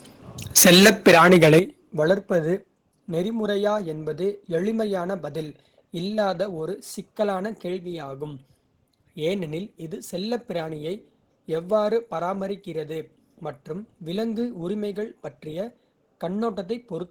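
From 0.57 to 1.59 s the speech shows microphone overload. Peaks run about 10 dB past the converter's limit, so roughly one sample in seven sits flattened at that limit, likely because the input volume was set too high. It sounds harsh and crackly. The waveform shows squared-off tops, and the spectrogram shows broadband smearing above the harmonics.

The microphone volume is stepped down twice: at 0.58 s by about 2 dB, and at 1.59 s by about 8 dB, just before "வளர்ப்பது நெறிமுறையா என்பது எளிமையான". Voice and background drop together in one sudden step, likely the call software reacting to the clipping. The waveform envelope shrinks abruptly, and the spectrogram darkens across all frequencies at once.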